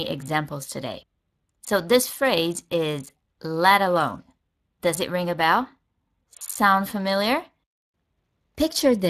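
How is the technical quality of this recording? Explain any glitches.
Quality is noticeably degraded by codec damage throughout. Speex codec coding starves the excitation of bits, leaving hoarse, buzzy speech with a noise-like top ending near 15.2 kHz, steady rather than warbling like MP3 artefacts; this fits roughly 22 kbps.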